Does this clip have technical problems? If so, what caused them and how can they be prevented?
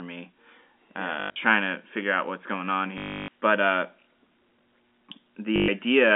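Yes. Packet loss with the last packet repeated occurs at 1.2–1.36 s (140 ms lost, longest gap 100 ms), 2.98–3.28 s (300 ms) and 5.56–5.68 s (120 ms). Replayed packets misalign with pitch, producing a robotic 50 Hz buzz consistent with 20 ms packets. Prevent it with a steadier network path, forward error correction or proper packet loss concealment.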